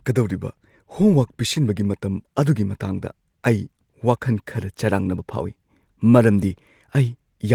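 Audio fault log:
No faults can be heard in this speech recording. The Opus voice compression leaves only light coding texture, with the band reaching up to about 20 kHz, which fits its hybrid mode at around 24 kbps.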